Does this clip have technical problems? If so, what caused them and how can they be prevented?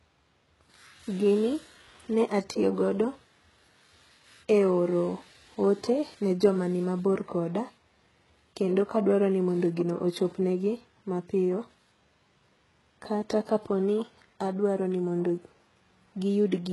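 Yes. Throughout the clip, the speech has likely gone through HE-AAC compression at a very low bitrate. The damage is heavy and fits something near 12 kbps. The codec spends its few bits on the lower spectrum and rebuilds the treble by copying lower bands upward under a coarse envelope. The top end is therefore synthetic and stops altogether at about 11.5 kHz. Because the copied harmonics don't line up with the real ones, s sounds come out gritty, metallic and lispy.

Encoding at a higher bitrate, or with standard AAC instead of the band-replication mode, would prevent this.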